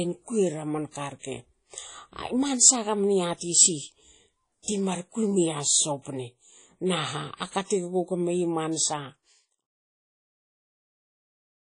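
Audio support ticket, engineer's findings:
Throughout: ringing, washy tone, hiss breathing with the speech, nothing audible above 10 kHz. Likely WMA compression, plainly audible damage consistent with about 32 kbps. Long transform blocks smear quantisation noise over tens of ms; weak spectral lines zeroed.

4.63–4.68 s, just before "ti mar kui": short hiss ahead of the attack, onset soft and smeared. Pre-echo, 52 ms spread. Block's noise, sized for the loud attack, fills the quiet gap before it. Smooth fade out from around 8.5 s to 9.67 s, no step or click.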